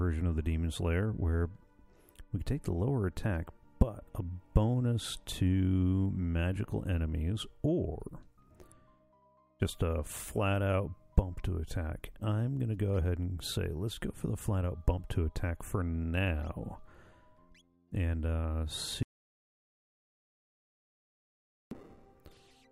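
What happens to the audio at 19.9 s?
At 19.9 s the sound is cut to silence, with no room tone, from 19.03 to 21.71 s: an audio dropout to silence, likely from lost input.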